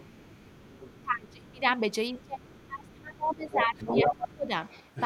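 From 0.0 to 1.0 s, the other side's voice leaks through faintly, about 25 dB below the speech. This is likely residual loudspeaker echo the canceller missed: a second voice rather than a delayed copy of the talker. It recurs at 2.14 to 2.95 s (about 30 dB down), 3.3 to 4.34 s (about as loud as the speech) and 4.65 to 5.05 s (about 15 dB down).

Between 1.01 and 4.51 s, speech is suppressed in double talk, likely because the canceller turned down both sides while they overlapped. For roughly 3 s in total the talker's own level dips by up to about 20 dB, unlike dropouts, which are unrelated to the other voice.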